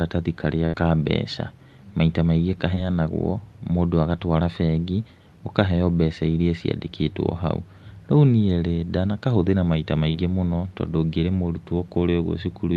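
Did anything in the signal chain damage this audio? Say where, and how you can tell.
Yes. At the network stage, a burst of packet loss hits from 0.65 to 0.75 s. About 80 ms of the stream never arrived in time, and the receiver papered over it by continuing the last sound for roughly 78 ms while fading it down. You hear the last sound held and dying away, then the speech jumps ahead. On a spectrogram the last spectrum freezes into flat horizontal lines that dim, then cut abruptly to new content.

Two short concealed packet losses also come from the network, at 2.75 to 2.78 s and 10.10 to 10.16 s. These are gaps of about 20 ms and 40 ms, concealed with roughly 10 ms and 38 ms of extrapolated audio. Each is a brief smear or wobble where the decoder guessed the missing sound and crossfaded back. A waveform shows a slight discontinuity, and a spectrogram shows a short, blurred patch. The band limit near 12 kHz looks like the Opus call codec at 32 kbps.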